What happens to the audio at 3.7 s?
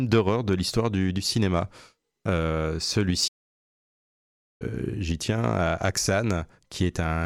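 At 3.7 s the speech is inside a playback stall. The output goes silent from 3.27 s to 4.62 s, a gap of about 1.3 s, cutting the speech off in mid-flow. The player likely ran short of data or was blocked. Sound then resumes.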